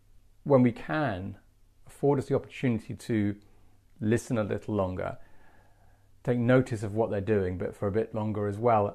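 No technical faults are audible.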